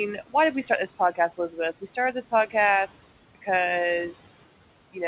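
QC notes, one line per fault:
Throughout, noise suppressor artifacts. The room noise sits about 17 dB below the speech. The suppressor treats that steady background as noise and turns its bands down, frame by frame, by about 17 dB. The noise sinks in the pauses. When speech starts, those bands open and the noise returns beneath it, so the background rises and falls with the talking. Nothing is heard above 4 kHz, which fits a narrowband G.711 call path.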